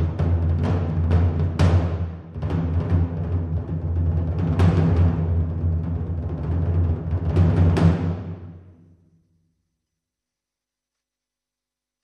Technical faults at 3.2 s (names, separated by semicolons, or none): none